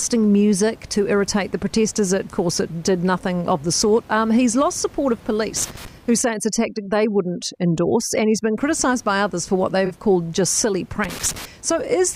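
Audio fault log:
5.56–5.88 s and 11.04–11.45 s: loose connector crackle. A worn or dirty contact in the signal path is making and breaking as it shifts, chopping the audio into irregular bursts of scratchy crackle. The two bursts last about 0.32 s and 0.41 s.
6.22–8.58 s: overdone noise removal. Noise reduction set far too hard is pulling individual frequency bands down whenever they sit near its noise estimate. The room noise, normally about 26 dB below the speech, drops and breaks up into twinkling specks.
9.86–9.92 s: corrupt frame concealed. Damaged AAC data was caught by the decoder, which covered the gap itself rather than playing garbage, over about 60 ms. That length fits roughly two frames.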